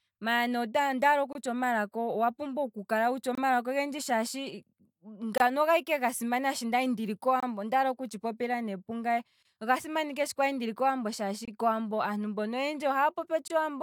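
Gaps between chunks interrupt the speech at 1.33, 3.35, 5.38, 7.40, 9.43, 11.45 and 13.48 s. Each is a 25 ms silence. The audio plays in 2-second chunks, with silence inserted at every join.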